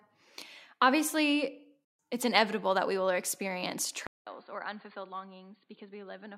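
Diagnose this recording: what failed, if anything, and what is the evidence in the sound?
At 4.07 s the speech cuts to silence for about 200 ms, then resumes about 10 dB quieter and noticeably duller through to the end at 6.38 s. On a spectrogram, energy above 4.6 kHz vanishes abruptly with a flat ceiling, and a new noise floor roughly 40 dB down fills the gaps. The waveform shows a gap, then smaller peaks. The likely cause is the input switched to a poorer device at the driver level, such as a narrowband headset microphone.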